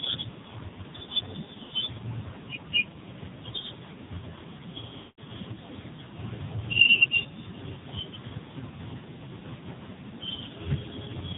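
AMR narrowband mobile codec damage runs through the whole of this speech recording. Everything above 4 kHz is missing, and the voice has the heavy buzzy, synthetic quality of a vocal-tract model driven by only a few pulses per subframe. That level of degradation fits one of the lowest AMR-NB modes, around 5.9 kbit/s. Lost AMR speech frames break the audio at 1.64 to 1.73 s, where the decoder fills about 60 ms by repeating its last pitch and filter settings at falling gain. The result is a short warbling dip, consistent with a run of three frames. A longer loss follows at 4.98 to 5.20 s. There the concealment stretches the sound for about 200 ms and fades it toward silence, which points to around ten consecutive frames failing their checksum. After this longer gap the voice returns weak or rough for a moment.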